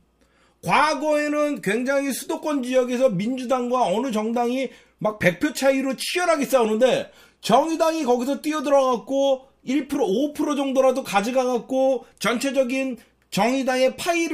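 No technical faults can be heard anywhere in it.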